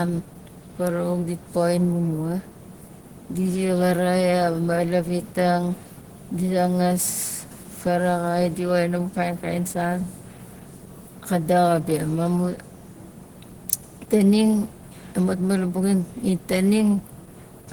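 Low-bitrate encoding, most likely Opus compression, runs through the whole of this speech recording, with damage that is plainly audible from start to finish. The sound fits the codec's hybrid mode at about 16 kbps: the lower band is carried by a speech-style model that leaves the voice hoarse and muffled, while the upper band is rebuilt coarsely, so the sound turns grainy and rough even though energy still reaches about 20.2 kHz.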